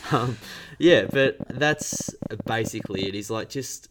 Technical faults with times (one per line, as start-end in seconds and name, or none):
0.90-3.07 train of clicks